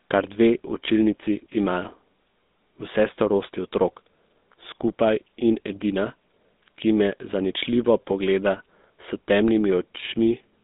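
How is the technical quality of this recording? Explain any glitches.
Technical quality is poor throughout, due to one fault. GSM full-rate codec, across the whole clip: a pulse-excited vocal-tract model, consistent with the 13 kbps mode, confines speech to roughly 200 Hz–3.7 kHz, leaving it buzzy and gravelly with nothing above 3.8 kHz.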